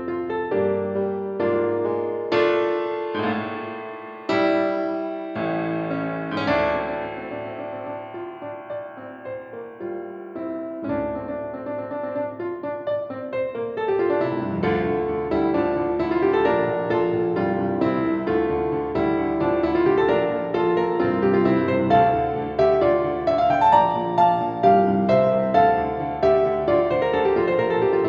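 No technical faults are audible.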